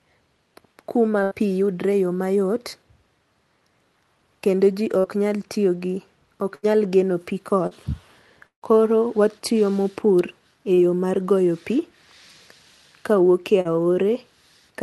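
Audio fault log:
1.23–1.34 s, burst of packet loss: about 80 ms of audio never arrived. The receiver stretched the last sound for about 75 ms, fading it, then jumped ahead past the missing stretch.
4.99–5.17 s, burst of packet loss: about 40 ms went missing. It was bridged with roughly 48 ms of continued, fading sound, and a further 5 ms was dropped.
6.55–6.66 s, burst of packet loss: between "nyal tiyo gi ok" and "nyal geno pii", about 80 ms was lost. The gap is filled with a decaying continuation of the preceding sound, then the audio resumes further on.
7.67–7.74 s, short concealed packet loss: right after "ok nyal geno pii", about 40 ms failed to arrive. The receiver synthesised a brief continuation, heard as a quick smear before blending back.
8.47–8.65 s, burst of packet loss: the longest gap, about 160 ms missing. The extrapolated sound fades out and leaves about 100 ms of silence before the audio returns.
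10.74–10.80 s, short concealed packet loss: about 40 ms dropped and patched with roughly 33 ms of extrapolated sound, giving a brief wobble where the real audio was replaced.
13.61–13.68 s, short concealed packet loss: just after "kawuok e", about 40 ms went missing. It was covered by continuing the previous sound, audible as a short smear.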